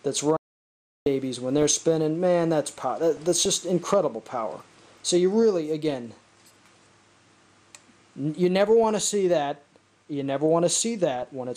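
Throughout, the sound is dull and grainy, with a gurgling edge and upper frequencies that flicker in and out. This is MP2 compression, likely at a starved rate that fits about 80 kbps, where high sub-bands are switched off and the remaining bands are coarsely quantised.

From 0.37 to 1.06 s the audio cuts to total silence for about 0.7 s, with no room tone at all. This is an audio dropout to silence, likely from the input being lost while the recorder kept writing silence. Whatever occurred then is gone.

At 1.58 to 1.83 s, 3.17 to 3.53 s, 8.69 to 9.09 s and 11.16 to 11.28 s, short bursts of burbling sit over the sound. This is DAB burbling. Weak reception let bit errors, on the order of a few per thousand, through into the MP2 data, so wrong samples put short blips of noise into single sub-bands.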